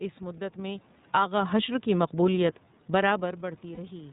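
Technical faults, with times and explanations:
Throughout: iLBC codec. The speech is band-limited, with nothing above 4 kHz, and has a slightly rough, synthetic edge that is plainly audible. iLBC is a narrowband VoIP codec that codes the excitation of every frame on its own, without borrowing from the previous one. That independence costs some smoothness, so the voice comes out clear but grainy. The character points to the 30 ms frame mode, which fits a rate of about 13.33 kbps.
0.99–1.31 s: automatic gain falling. The level sinks by about 5 dB over roughly a third of a second. The room noise drops along with the speech, which shows that the gain changed rather than the talker. The automatic gain control judged the input too loud and pulled its gain down gradually, so the whole signal dims together instead of the voice alone moving away from the microphone.
1.22–1.66 s: automatic gain rising. 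Almost immediately, overlapping the fall, the level swells back up by about 5 dB over just under half a second. The background rises in step with the speech. The automatic gain control now found the input too quiet and raised its gain gradually. Coming straight after the cut, this gives a brief dip-and-recover pumping in the loudness rather than a steady level.
3.75–3.79 s: lost iLBC frames. For about 30 ms the sound turns into a held, faintly buzzy, breathy tone instead of normal speech. One packet went missing, and the decoder filled the hole by repeating the last pitch cycle mixed with noise. Because each iLBC frame decodes independently of the one before, the voice snaps back to normal almost at once when the next frame arrives, with no lingering smear.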